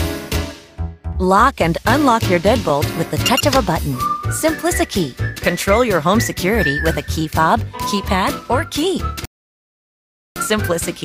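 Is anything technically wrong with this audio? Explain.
Yes, there are two faults. From 2.21 to 3.65 s, CD scratch ticks: seven clicks, about five per second, each lasting a few milliseconds. A scratch defeats error correction once per disc revolution, so the player patches or mutes those samples. On a spectrogram they appear as thin, evenly spaced vertical lines.

From 9.25 to 10.36 s, a rebuffering stall: the player ran out of downloaded data, so the sound drops to silence for 1.1 s, then resumes exactly where it stopped. The waveform shows a flat gap.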